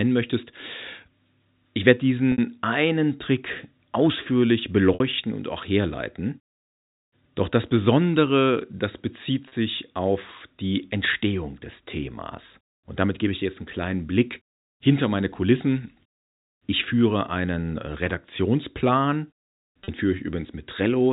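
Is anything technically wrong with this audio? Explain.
Yes. Packet loss with pitch repetition occurs four times, in speech carried over telephone-band G.711 coding. At 2.32–2.38 s and 4.94–5.00 s, each 60 ms long, and at 9.48–9.52 s and 19.84–19.88 s, each 40 ms long, the sound briefly holds on one buzzy tone instead of continuing. This happens because audio packets went missing, likely three 20 ms packets in the longer gaps and two in the shorter ones. The receiver filled each hole by repeating the last pitch period and fading it out.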